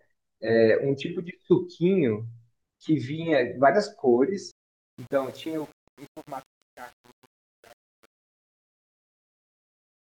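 As the speech fades out from 4.51 s to the end at 10.19 s, truncation distortion sets in. The undithered gain stage, which fits about 8 bits, reduces the waveform to coarse steps. Unlike dropouts, the grit is worst from 4.79 s to the end as the level falls.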